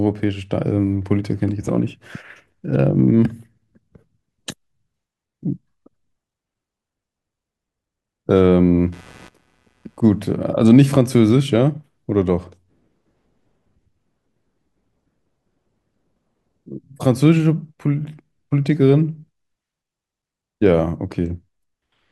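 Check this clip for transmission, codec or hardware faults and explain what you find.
One hardware fault is present: a burst of computer activity noise.

From 8.35 to 10.35 s a faint buzzing chirp, pulsing at around 150 per second and sitting roughly 35 dB below the speech, rises over the audio and then stops. Changing load on the computer's processor, graphics card or mouse shifts the ground shared with the audio circuit, so the interference follows the machine's activity rather than the speech. A spectrogram shows a comb of harmonics spaced about 150 Hz apart, starting and ending abruptly. The waveform shows small, regular spikes riding beneath the signal.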